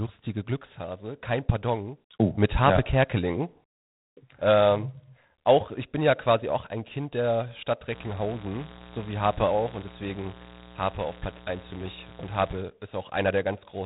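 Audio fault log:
throughout: G.726 ADPCM. Speech carries a harsh, rasping hiss that rises and falls with its level, unlike steady background noise, and nothing passes above 3.8 kHz. Coarse difference coding this audible fits the 24 kbit/s mode.
7.89–12.61 s: mains buzz. A steady, raspy 60 Hz buzz sits roughly 20 dB below the speech, its sharp switching spikes spreading harmonics upward. That distinguishes it from a smooth hum. Unlike the codec hiss, it holds constant regardless of speech level.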